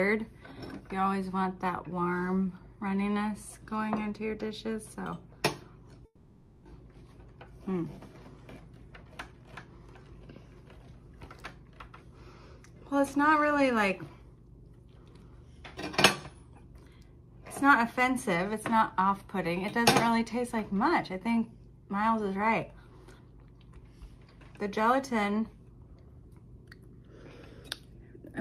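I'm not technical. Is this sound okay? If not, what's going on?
No. At 6.05 s the sound cuts out for about 0.6 s and resumes at 6.65 s. In that gap the last sound is stretched into a short fading buzz, followed by a brief moment of silence, and then the audio picks up further along, with that stretch simply gone. This is a long network dropout: the likely cause is that the connection stopped delivering audio, and the receiving end filled the hole as best it could.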